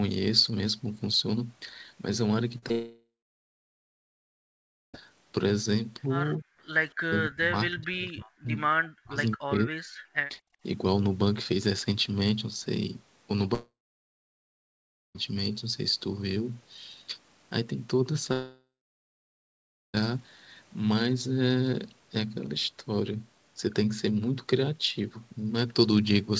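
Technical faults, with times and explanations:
2.58 to 2.64 s and 2.68 to 2.72 s, short concealed packet loss: about 40 ms and then 20 ms of speech arrived too late, and the decoder bridged each gap by extending the preceding sound. Each gap is heard as a brief smear or wobble just before the longer break.
2.72 to 4.96 s, 13.54 to 15.17 s and 18.33 to 19.96 s, long network dropout: the speech stops for about 2.2 s, then twice for about 1.6 s. Each gap starts with a fading concealment buzz and then goes silent for roughly 1.8, 1.4 and 1.3 s. Speech resumes afterwards with the missing stretch gone, most likely because packets stopped arriving.
6.40 to 6.46 s, 7.05 to 8.50 s, 8.78 to 9.18 s and 9.36 to 9.90 s, speech suppressed in double talk: the speech dips by some 25 dB in the first brief moment and then by around 40 dB across the longer stretches, so it fades or cuts out in pieces. This is likely the echo canceller attenuating the near talker while the far side was also speaking.
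10.41 to 10.63 s, background gated by the echo canceller: the room sound drops by about 35 dB for roughly 0.2 s and then returns. The canceller clamped the microphone hard while the loudspeaker played and then let go.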